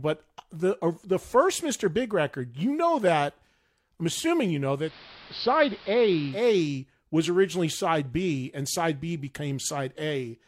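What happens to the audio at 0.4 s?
Nothing goes wrong at 0.4 s; the audio there plays through cleanly, with no dropout, click or distortion.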